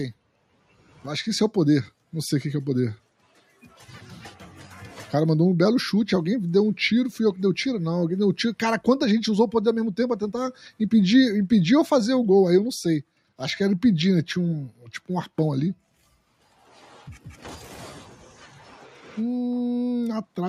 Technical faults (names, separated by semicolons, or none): noise suppressor applied to music or sounds; sound cut by the noise suppressor